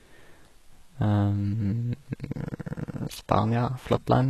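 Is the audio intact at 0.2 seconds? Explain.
No, HE-AAC compression runs throughout, including 0.2 s: treble above about 12.3 kHz is gone, and the upper band sounds gritty and lispy, likely rebuilt by band replication at a low bitrate near 16 kbps.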